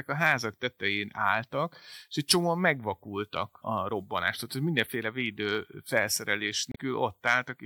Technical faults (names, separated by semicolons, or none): damaged data in a compressed stream